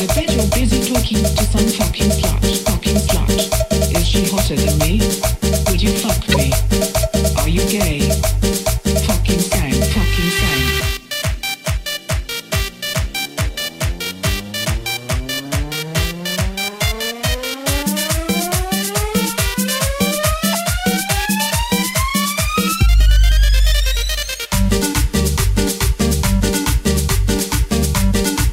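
Damaged compressed frames were decoded and played anyway (corrupt frame decoded), misplacing energy across frequencies for roughly one or two frames each: loud chirp-like bursts at 6.32–6.35 s and 20.53–20.55 s, and a softer blip at 15.14 s.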